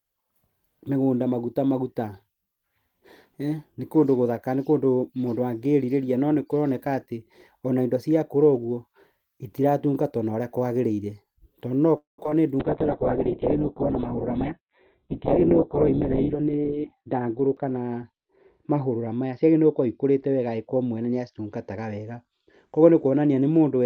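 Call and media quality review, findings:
Call audio freeze, 11.97–12.19 s. Likely cause: packets delayed in transit, jitter buffer ran dry. Receiver stretched the last speech sound into a fading tail, then about 0.15 s of silence; speech resumes where it stopped, 0.21 s later, nothing lost.

Short concealed packet loss, 12.24–12.35 s and 12.30–12.32 s. Decoder missed roughly 20 ms and 10 ms of speech; concealment extrapolated from the preceding sound and crossfaded back. Audible as a brief smear right after the freeze.

Call bitrate drop from 12.60 s to the end of the clip. Bandwidth estimate collapsed, so the Opus encoder went from 32 kbps to 6 kbps and audio bandwidth from 20 kHz to 4 kHz, holding the lowest rate for about 3.4 s. Speech turns muffled, rough and watery.

Jitter buffer speed-up, 14.37–15.40 s at 113% and 16.34–17.14 s at 107%. Buffer overfilled; receiver trimmed pitch-period slices repeatedly, around 150 ms then 70 ms in total. 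Speech runs hurried at unchanged pitch.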